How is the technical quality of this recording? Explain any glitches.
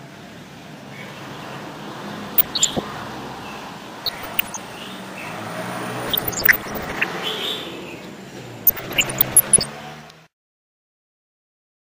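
Quality is compromised by DAB burbling at 2.27–2.79, 4.05–4.61, 6.03–7.04 and 8.67–9.66 s. Weak reception let bit errors, around 1 percent, slip past error correction, corrupting audio samples so individual sub-bands get short blips of noise, giving bubbling, squelchy chirps over the sound, worst in the last two.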